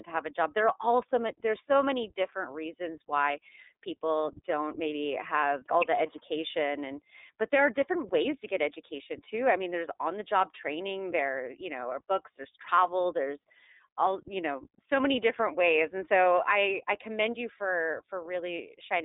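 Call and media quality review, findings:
iLBC codec damage, entire clip, plainly audible. Hard band limit: line band about 300 Hz to 3.7 kHz, nothing above 3.8 kHz. Speech rough and slightly synthetic, typical of frame-independent excitation coding in 30 ms frames. Roughness fits the 13.33 kbps mode. Component: narrowband VoIP codec leg on the call path.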